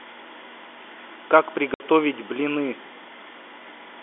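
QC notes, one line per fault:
1.74–1.80 s, packet loss filled with silence: a 60 ms dead gap with hard edges, which fits three 20 ms packets, not the smeared or repeated sound of concealment.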